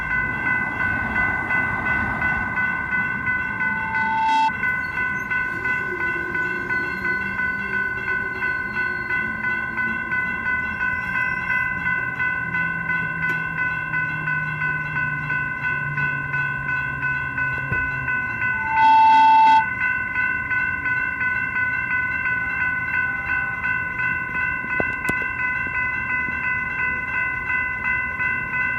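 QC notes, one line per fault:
3.43–4.52 s, loudspeaker feedback squeal: an 885 Hz tone swells over about a second and rises above the sound. The mic-speaker loop's gain exceeds one at that frequency.
18.52–19.70 s, loudspeaker feedback squeal: the same 885 Hz tone returns faster, within a fraction of a second, and much louder. The loop is again running away.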